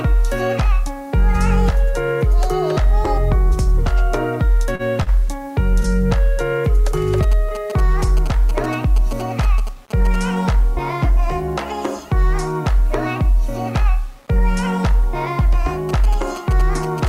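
Low bit depth without dither runs through the whole clip: the grainy distortion follows the sound and sits roughly 35 dB below it, likely from rounding to about 7 bits. Short stalls from a late packet come at 4.75 to 4.82 s and 5.03 to 5.10 s; the receiver holds the last sound for 38 ms and then 34 ms, with nothing lost. GSM signalling bursts appear from 7.23 to 10.16 s and from 15.89 s to the end: a nearby phone's rectified radio bursts give galloping ticks and 217 Hz buzzes, about 15 dB below the signal.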